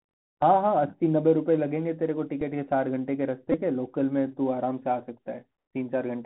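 Throughout, the speech runs through the Bluetooth CVSD headset codec. Nothing passes above 4 kHz, and s sounds turn scratchy over a granular hiss, unlike the clean dullness of a simple low-pass.

At 2.41 s a Bluetooth headset packet repeated gives one small tick. From 3.52 to 3.55 s, repeats every 3.75 ms make a steady buzz near 267 Hz, which fits about four lost packets. Its fixed pitch tells it apart from irregular dropout clicks.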